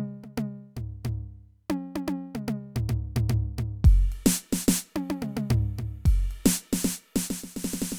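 No technical faults can be heard anywhere in this music clip. There are no dropouts, glitches or other disturbances in the audio at any point.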